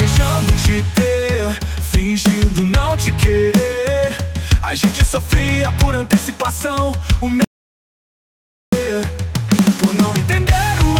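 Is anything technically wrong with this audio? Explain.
Yes. From 7.44 to 8.73 s there is an audio dropout to silence lasting about 1.28 s. The input was likely lost while recording continued writing zeros, so the sound cuts off mid-flow into dead digital silence with no room tone, then resumes abruptly. A waveform shows a flat line; a spectrogram shows a fully blank column.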